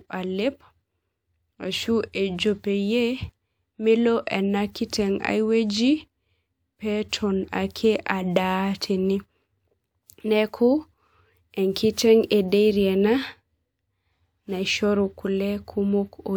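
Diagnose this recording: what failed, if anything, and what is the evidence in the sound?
Nothing in this speech recording points to a failure at any stage of the signal chain. There is no audible evidence of a fault anywhere in the sound, so there is nothing to diagnose.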